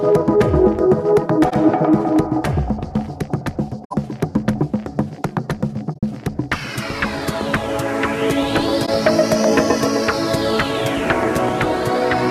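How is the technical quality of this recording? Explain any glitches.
The recording has four short faults, each a corrupt frame concealed by the decoder. They fall at 1.50 to 1.53 s, 3.84 to 3.95 s, 5.94 to 6.03 s and 8.86 to 8.89 s. Damaged bits in the coded stream were detected, and the decoder muted or smeared over the bad stretch instead of playing garbage. The affected stretches last about 30 to 110 ms, matching roughly one to five frames.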